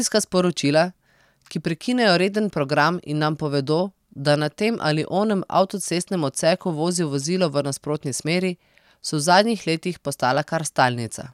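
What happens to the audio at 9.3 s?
Nothing goes wrong at 9.3 s: the speech carries on intact through that moment, with no dropout, click or distortion to be heard.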